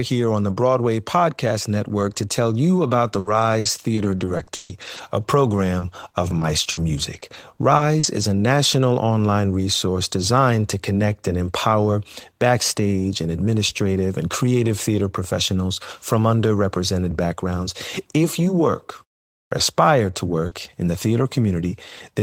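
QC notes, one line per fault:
3.07–8.23 s, repeated packet loss (robotic sound): a string of short holes, about 640 ms in total and the longest 140 ms, each filled by extending the preceding sound. Twelve percent of the stretch is synthetic, so it sounds choppy, with pieces missing.
19.28–19.52 s, clipped start after a pause: after a 0.31 s pause the output path needed time to wake or relock, so about 235 ms of the onset is swallowed. The sound begins abruptly out of silence, missing its opening portion.
20.13–20.15 s and 20.51–20.53 s, lost packet rebuilt from error correction: each 20 ms frame was lost and replaced by the low-bitrate copy carried in the following packet. There is no gap, but both frames sound rougher and noisier than their surroundings.
20.47–20.53 s, short concealed packet loss: 40 ms never arrived in time and was filled by continuing the last sound before blending back into real audio, overlapping the second rebuilt frame. 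It is heard as a brief smear or wobble.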